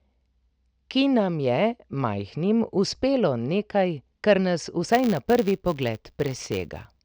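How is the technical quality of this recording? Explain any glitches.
The recording has one processing fault, confined to its final stretch.

From 4.89 s to the end at 7.04 s, a filter restarted on every block: it discards its state at each block boundary and starts from silence, producing a small transient each time. The result is a 100 Hz buzz that tracks the speech level, which points to blocks of about 10 ms.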